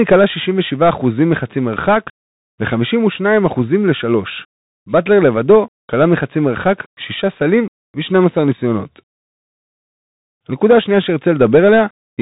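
Throughout, the speech is muffled and scratchy, with nothing above 3.8 kHz, harsh sibilants and granular hiss: a Bluetooth CVSD headset codec, its one-bit delta steps lagging loud high sounds.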